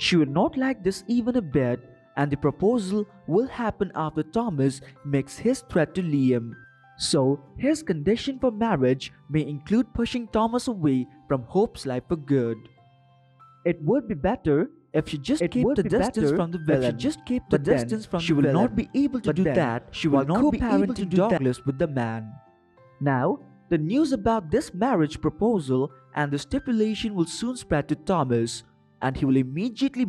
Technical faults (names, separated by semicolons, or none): doubled audio track